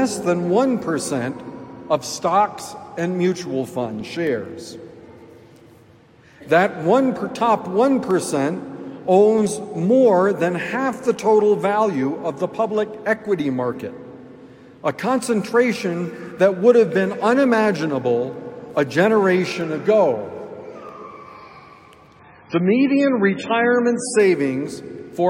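From 0.43 s to 24.72 s, small clicks recur every 1.28 s, about twenty in all, likely clock drift buffer slips. Two clocks differing by roughly 150 ppm force the buffer to drop or repeat a few samples. The metronomic spacing and lack of any gap distinguish it from network dropouts.

Between 22.19 s and 24.19 s the adaptive stream drops to a lower bitrate. Nothing remains above 10.5 kHz and smearing artefacts thicken, which points to a fall from roughly 128 to 16 kbit/s MP3. The sudden, seamless switch and return set it apart from packet-loss glitches.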